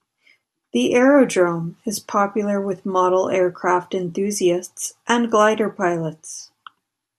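The speech recording has no audible technical faults anywhere in its signal.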